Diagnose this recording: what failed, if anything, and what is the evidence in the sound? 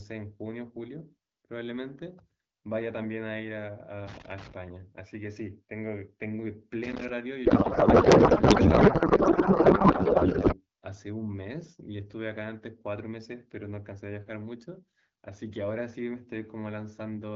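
The analogue wiring has a loose connector crackle. Irregular bursts of crackle and scratching break through from 4.07 to 4.52 s and again from 6.84 to 7.09 s. A worn or dirty contact is making and breaking as the cable moves. Each break chops the signal, and any DC sitting on the line turns the transitions into pops. The bursts are short and uneven, which points to physical movement, not to a steady electrical fault.

The codec stage has a codec payload misread. From 7.45 to 10.55 s the speech is replaced by garbled noise and warble that barely follows it. Outside that span the audio carries the light, clear texture of AMR wideband, which fits a rate around 12.65 kbit/s. The frames were packed octet-aligned but unpacked as bandwidth-efficient. The decoder therefore read plausible frames with every field shifted. The damage ends once both sides agree on the packing again.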